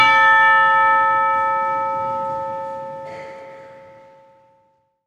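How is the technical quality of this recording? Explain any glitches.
The signal holds steady and continuous, with no technical faults to point to.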